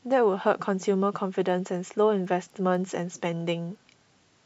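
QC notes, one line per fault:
1.50 to 4.46 s, resampler restarted on every block: each 250 ms block is converted from 48 kHz to 24 kHz on its own, leaving an error at every edge. The ticks come at a steady 4 per second and go quiet in pauses, unlike random clicks.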